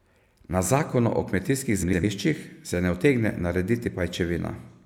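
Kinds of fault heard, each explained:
Frames out of order: just after "zakonu o kmetijskih", from about 1.82 to 2.04 s, two neighbouring chunks of roughly 105 ms play in swapped order, which fits two four-frame blocks. You get a garbled flutter, but no time goes missing.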